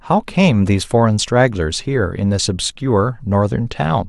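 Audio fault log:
No faults detected anywhere in the speech.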